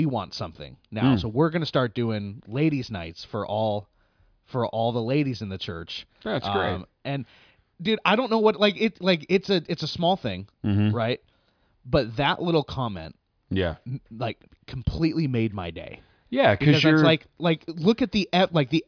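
No technical faults can be heard anywhere in this recording.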